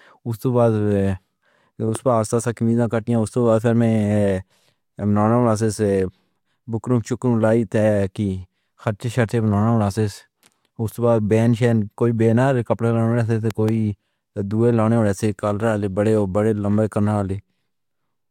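At 1.95 to 1.97 s there's a loud pop, a sharp click sitting well above the speech, then a double pop from 13.51 to 13.71 s. Likely a voltage spike from a plug, switch or static, with the speech running on underneath.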